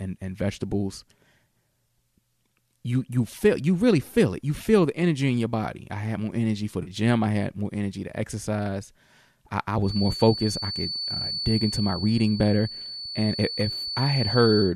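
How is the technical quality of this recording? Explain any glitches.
The speech has two glitches: a brief concealed dropout and a whistle that persists to the end. The low-delay compression underneath, likely AAC-ELD, leaves only light graininess.

AAC frame loss with concealment: from 6.83 to 6.90 s, about 40 ms of coded audio went missing, which fits a handful of lost frames. The decoder patched the gap by reusing and reshaping the last good spectrum, so the speech turns briefly smeared and noisy there.

Feedback whistle: from 9.80 s to the end, the loudspeaker-to-microphone loop is likely sitting just short of runaway feedback at 4.5 kHz. It is heard as a thin, steady high tone behind the speech, about 10 dB below it, that swells and fades slowly in level.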